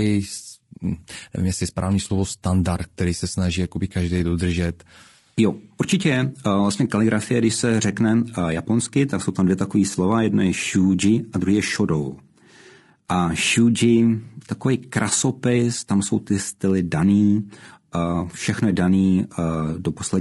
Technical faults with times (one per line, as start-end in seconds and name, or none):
0.00-20.20 low-delay AAC compression